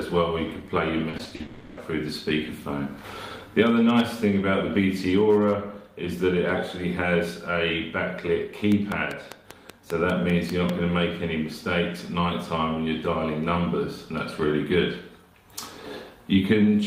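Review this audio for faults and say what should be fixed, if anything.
From 1.09 to 1.41 s the sound turns choppy and robotic: repeated packet loss leaves a rapid series of holes, the longest 40 ms, patched by repeating the preceding sound. Prevent it with a larger jitter buffer and a more stable network path.

From 1.41 to 1.79 s a buzzy continuation of the last sound carries on and fades, with nothing new coming through. This is likely a long network dropout, with about 0.36 s of real audio never arriving. Prevent it with redundant transmission or forward error correction and a connection that does not stall.

From 8.72 to 10.70 s a regular train of clicks ticks over the sound at about 5 per second. There are about ten clicks, peaking roughly 15 dB above the sound, most likely from electrical interference or a faulty connection. Prevent it by shielding and rerouting cables, moving away from nearby equipment, and checking the interface drivers and connection.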